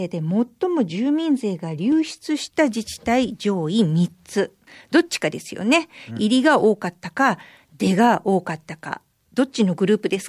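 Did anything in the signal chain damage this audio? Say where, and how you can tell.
No, nothing in the signal chain has damaged this speech recording, and the signal arrives intact with no stage of the path leaving an audible mark on it.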